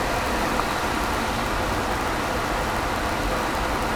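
A block size mismatch (padded) runs from start to finish. One processing stage hands on blocks slightly shorter than the next stage expects, and the shortfall in each block is filled with silence. Those tiny gaps repeat at the block rate, giving a steady buzz at 91.5 Hz under the sound. The padding also stretches the timeline, so the audio plays at 0.996 times normal speed while its timbre stays the same.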